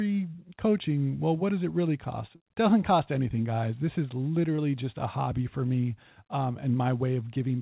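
At 2.36 s, right after "does it really cost" and before "doesn't cost anything guys", a short concealed packet loss leaves about 40 ms of the call missing. The receiver filled the gap by extending the preceding sound and then blending back into the real audio, so it comes across as a brief smear or wobble. A second, 20 ms loss at 4.56 s, just before "just a hobby for", produces a shorter smear. On a spectrogram each shows as a strip of copied, overly regular harmonics or flat noise where the natural movement of the speech stops. On the waveform each is a short, too-steady stretch with a slight seam at the join. All of this rides on a narrowband call path with nothing above 4 kHz, which fits 64 kbps G.711 mu-law coding.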